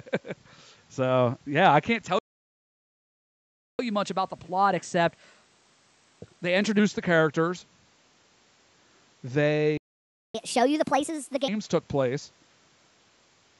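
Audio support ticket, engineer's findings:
Playback stall at 2.19–3.79 s (1.6 s) and 9.77–10.35 s (0.57 s). Speech cuts out mid-flow. The waveform shows flat silence, and the spectrogram shows a blank column across all bands. Likely buffer underrun or a blocked playback thread starving the output.

Catch-up at higher speed at 3.79–6.79 s (1.1x, pitch up roughly one and a half semitones) and 10.35–11.48 s (1.5x, pitch up about seven semitones). The player resamples its backlog to recover lost time. On the spectrogram, harmonics shift upward and syllables compress, then snap back to normal.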